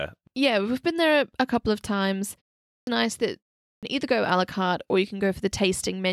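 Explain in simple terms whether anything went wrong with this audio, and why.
Two short pauses lead to a clipped start after a pause. After "a couple of times", a pause of about 0.39 s follows. The sound then returns at 2.72 s with its first 0.15 s missing, just before "nice that". It happens again at 3.65 s, after a 0.3 s pause, cutting about 0.18 s before "either go". The playback device seems to doze off during silence. It wakes up too slowly, so each new phrase begins abruptly. The muted pauses themselves cost no sound.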